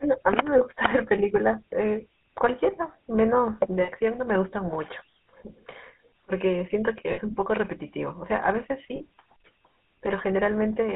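From start to end the speech carries the buzzy, gravelly roughness of the GSM full-rate codec, which fits its 13 kbps coding. The band runs only from 200 Hz to 3.6 kHz, but unlike a plain telephone band-limit, the grit comes from coarse pulse-driven excitation rather than from filtering alone.

Lost GSM frames occur at 0.58–0.61 s, 3.82–3.90 s, 7.12–7.20 s and 8.96–9.06 s, lasting about 20, 60, 60 and 40 ms. The decoder repeats the last good frame, so each gap becomes a brief rough, metallic ring rather than a silent dropout or a click.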